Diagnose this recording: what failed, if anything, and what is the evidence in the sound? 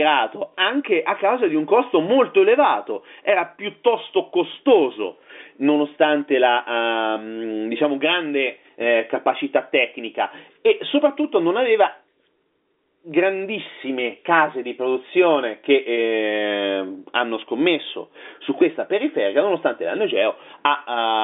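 Nothing failed: the speech sits in an ordinary telephone band of about 250 Hz to 3.6 kHz with nothing above 3.7 kHz, which fits a G.711 A-law line at 64 kbps, and no stage in the chain shows a defect.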